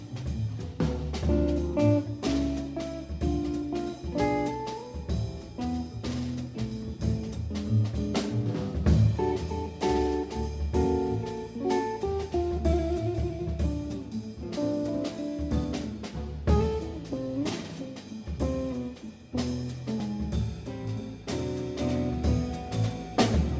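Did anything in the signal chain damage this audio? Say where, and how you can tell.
No, nothing along the chain, from capture through conversion, transmission and playback, left any damage you can hear in this one.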